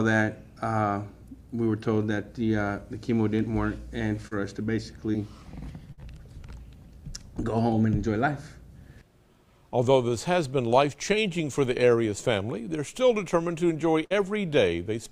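At 4.27 to 4.33 s and again at 5.13 to 5.16 s there's short concealed packet loss: about 40 ms, then 20 ms, never arrived, and the receiver patched it by extending the preceding sound, giving a quick smear. At 5.92 to 6.01 s and 14.05 to 14.12 s you get a burst of packet loss, roughly 60 ms each time, bridged by a held, fading continuation before the audio picks up past the gap.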